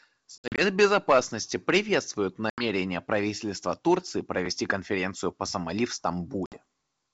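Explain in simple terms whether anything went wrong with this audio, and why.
Packet loss on an ADPCM call breaks up the speech three times: 0.38 to 0.61 s as scattered gaps, 2.50 to 2.64 s, and 6.46 to 6.58 s. Each hole is abrupt silence. Unlike a simple dropout, the speech comes back slightly distorted for a moment, because the decoder briefly loses track of the sound before catching up.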